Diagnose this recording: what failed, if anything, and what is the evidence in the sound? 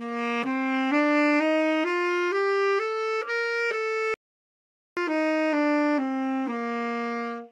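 A playback stall, at the playback stage: the player most likely ran short of data or had its output thread blocked. The everyday sound cuts to silence at 4.14 s for about 0.83 s, then resumes at 4.97 s once the output recovers.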